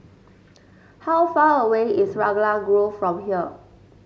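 No technical faults can be heard anywhere in the speech recording; level, continuity and timing hold steady throughout.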